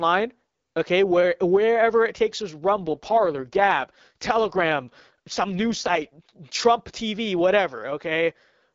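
From 2.70 to 6.36 s the speech turns rough, raspy and synthetic, with no gap or loss of bandwidth. This is an AMR rate drop: the AMR-WB codec steps down from a rate fitting 12.65 kbit/s to its lowest mode, consistent with 6.6 kbit/s, spending bits on error protection, then recovers.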